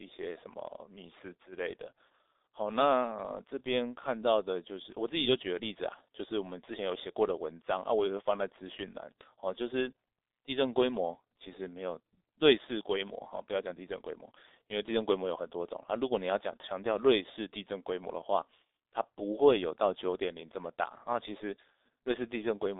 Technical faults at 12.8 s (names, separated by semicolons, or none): G.723.1 codec